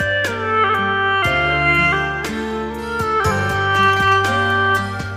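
No faults found; nothing in the audio needs attention.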